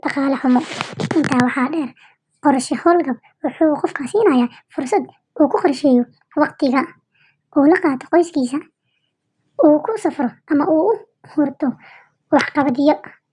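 From start to finish the speech runs fast and sits high, the signature of a wrong sample rate. Everything moves at 1.5 times normal speed and the pitch is raised by about 7 semitones, a perfect fifth, because the samples are being clocked out faster than they were captured, with no rate conversion in between. The ratio points to 16 kHz material being played back at 24 kHz, giving the voice a hurried, chipmunk-like quality throughout.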